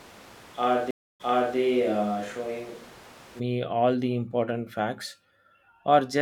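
From the start of the speech until 3.38 s, the sound is roomy and hollow, thin in the bass, with background noise sitting roughly 25 dB below the speech. That points to a switch to a distant microphone, likely a camera or room mic standing in for a close microphone whose signal was missing. The level is little different from the close-miked section that follows, but the return to direct, fuller sound at 3.38 s is abrupt.

Within that stretch, a stream reconnect occurs between 0.91 s and 1.57 s. The audio drops out for 0.29 s while the connection breaks and the player reconnects. A new decoder then starts mid-stream, and playback resumes about 0.37 s earlier than where it cut off, so a short section is heard twice as the server resends buffered audio. The first moments after the restart come back muted or faded in.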